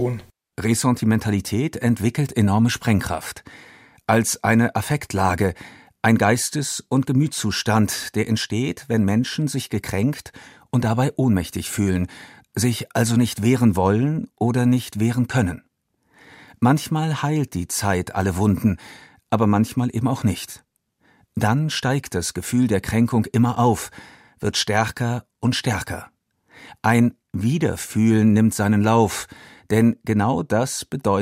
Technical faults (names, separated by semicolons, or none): none